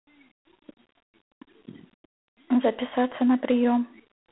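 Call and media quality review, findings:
Harsh, rasping hiss riding on the speech throughout, rising and falling with its level; band-limited to roughly 300 Hz to 3.5 kHz, nothing above 3.9 kHz. G.726 ADPCM at coarse quantisation, consistent with 24 kbit/s: too few difference bits per sample.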